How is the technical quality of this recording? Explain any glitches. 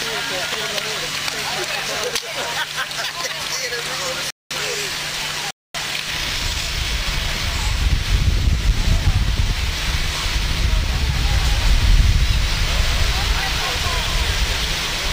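The recording has two playback stalls and a doubled track that persists to the end.

Rebuffering stalls at 4.30 to 4.51 s and 5.51 to 5.75 s: the player exhausted its downloaded audio and paused, adding about 0.20 s and 0.24 s of silence before resuming exactly where it stopped. Waveform and spectrogram both show flat empty gaps with nothing lost.

Doubled audio track from 11.1 s to the end: an abrupt, dry, full-band copy about 5 dB quieter trails the original by roughly 200 ms, likely from a second capture through a slower path. The spectrogram shows every event repeated as a slightly quieter, time-shifted twin without a decay tail.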